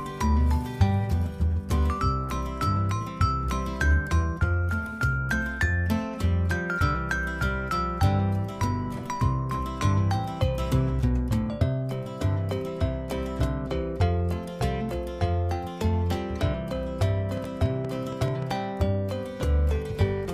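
From 17.37 to 18.52 s, a train of clicks ticks over the sound. About seven uneven pulses, roughly 6 per second, peak about 5 dB above it. Likely interference.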